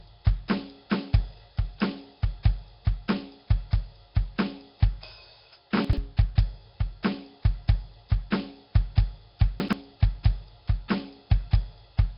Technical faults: Nellymoser compression; chunks out of order

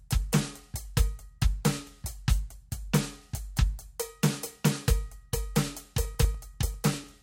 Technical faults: periodic USB or driver dropouts

